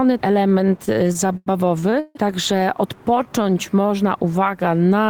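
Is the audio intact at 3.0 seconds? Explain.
No. At 3.0 seconds the audio sits inside a jitter buffer slow-down that runs from about 2.96 to 3.88 s. The receiver's buffer was short on reserve, so it repeated individual pitch periods and fragments of pauses to stretch the signal, adding about 122 ms over that span. Playback drops to roughly 87% speed while the pitch stays the same, so sounds are audibly drawn out.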